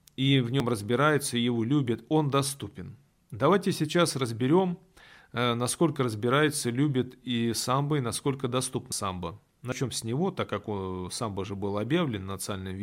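The speech has three jumps where the capture side likely fell behind, a dropped buffer (overrun), with audio overwritten before it was read. Each join skips ahead: at 0.6 s before "разбирается его любят он", at 8.92 s after "и самбо и насколько" (about 70 ms gone), and at 9.72 s before "с него так как" (about 40 ms each otherwise).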